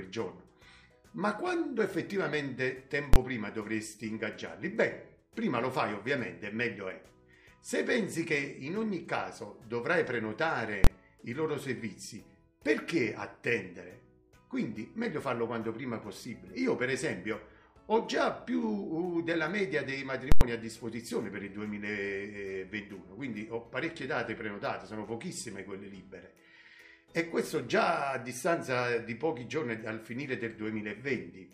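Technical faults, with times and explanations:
3.14–3.16 s and 10.84–10.87 s: invalid numbers at full scale. A calculation produced infinite or invalid values that became the largest positive or negative value, pinning the output for about 23 ms, which fits a 1024-sample processing block. At that length each is heard as a single loud bang.
20.32–20.41 s: invalid numbers at full scale. The output is pinned at one extreme value for about 93 ms, consistent with a 4096-sample block. The jump onto and off the rail gives a very loud pop at each edge, with no sound between them.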